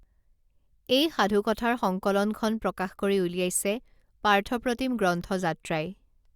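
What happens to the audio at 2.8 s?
Nothing goes wrong at 2.8 s; the speech carries on intact through that moment with no audible fault.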